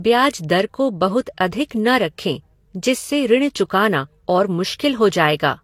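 From start to end, the speech carries the marks of transcoding between lossy codecs. Nothing is heard above 17.2 kHz. The texture suggests two different encoders stacked together. The likely chain is a Vorbis encode followed by an HE-AAC encode, both at rates that point to roughly 48 kbit/s. The second encoder wastes bits reproducing the first one's errors. Its own artefacts then land on top. Both sets of artefacts sound at once.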